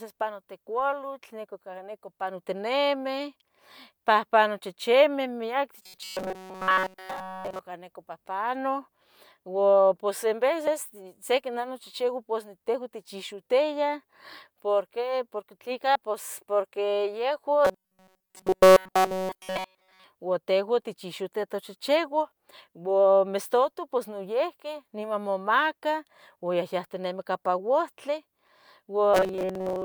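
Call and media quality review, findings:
Robotic sound from repeated short buffers at 5.83–7.59 s (after "pahpano chichimeh miaque", before "neco pahpano"), 17.65–20.04 s (ending before "ua tehuan tichoxitia") and 29.14 s to the end. There is a rigid metallic buzz at 188 Hz, which fits a roughly 5.3 ms block being looped. That block is repeated throughout the first two spans and for about 70% of the last. The likely cause is buffer underrun on the playback side, with a short segment replayed in place of the skipped audio. Unlike codec distortion, the buzz stays locked at 188 Hz.

Compressed frames skipped at 10.67 s (between "ua pos en" and "se nah nachihchiua pos") and at 15.95 s. The audio jumps ahead by about 70 ms and about 100 ms, roughly two and three 32 ms frames. The decoder is dropping missing or damaged frames. Unlike a packet dropout, there is no silent gap.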